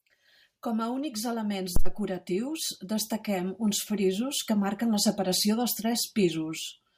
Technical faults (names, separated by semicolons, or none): phantom power thump